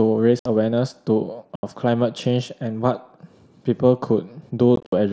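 Unconcealed Bluetooth headset packet loss cuts abrupt holes into the speech at 0.39–0.46 s and 1.56–1.63 s, then chops it across 4.76–4.93 s: lost link packets became silence or an idle pattern, never filled in.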